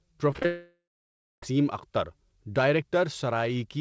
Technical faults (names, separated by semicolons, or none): repeated packet loss (robotic sound); long network dropout